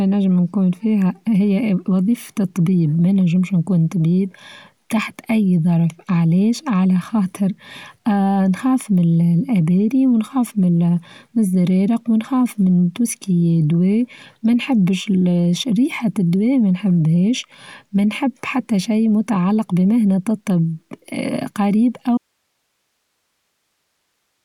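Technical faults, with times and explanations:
22.18 to 24.45 s, audio dropout to a faint residue: speech cuts off abruptly, leaving only faint hiss to the end, likely from losing the signal while the downstream path stayed live.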